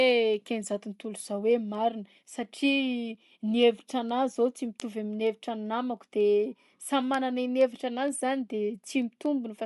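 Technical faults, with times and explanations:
Throughout: Bluetooth LC3 compression. The sound has a plainly audible breathy, grainy edge, and nothing is present above 11.5 kHz. This is likely LC3 coding at a modest rate, which fits something around 48 kbps with 10 ms frames: the codec discards much of the upper spectrum and patches it with shaped noise. Unlike MP3-style swirl or a plain low-pass, the top is hissy rather than simply missing.
0.11 to 9.49 s: word clock ticks. Short, sharp ticks of uneven strength recur about every 0.2 s, roughly 40 in all. Each one is a single sample dropped or repeated where a receiver running on its own clock slips past the sender's, with a mismatch that fits about 100 ppm. The metronome-like regularity sets these apart from random dropouts or vinyl-style crackle, and each tick is far too brief to be a gap.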